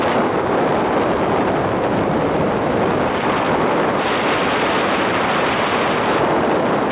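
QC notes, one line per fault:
No technical faults were found in the signal.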